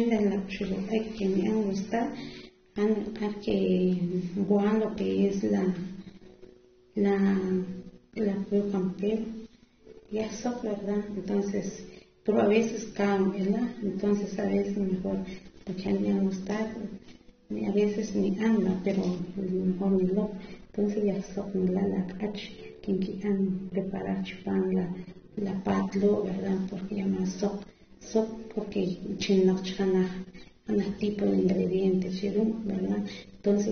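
From start to finish, the speech has nothing above 6.3 kHz. The top end is simply missing. Sibilants sound fizzy and smeared, and sustained sounds warble. The damage is plainly audible. This points to AAC compression, likely AAC-LC at a low bitrate of around 24 kbps. At that rate the encoder drops the upper band and quantises the rest coarsely, which leaves a dull, grainy texture.

From 19.2 s to 25.4 s, the sound turns even duller and more muffled. This is de-emphasis applied wrongly. A treble cut meant to reverse pre-emphasis hit audio that never had any boost, or was applied twice. The response slopes down smoothly with frequency, reaching about 14 dB down at 10 kHz relative to 1 kHz. Consonants lose their edge through this stretch. Brightness returns once it ends.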